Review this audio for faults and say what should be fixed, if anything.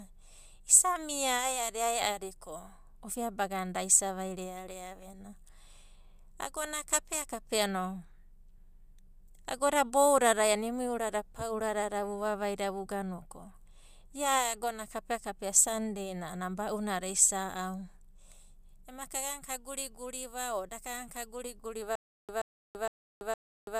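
From 21.95 s to the end, the speech breaks into a stutter with silent gaps: a 128 ms fragment repeats four times, each followed by about 333 ms of digital silence, a 461 ms cycle. This is likely a stalled stream replaying its last buffer. The waveform shows identical blocks separated by flat lines, and the spectrogram shows matching vertical slices with empty columns between them. Deeper buffering and proper underrun handling in the playback or streaming chain would prevent it.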